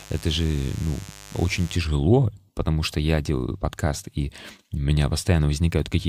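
From the start to 1.77 s a steady, raspy mains buzz sits under the speech, roughly 20 dB down: 50 Hz switching spikes leaking harmonics into the kilohertz range.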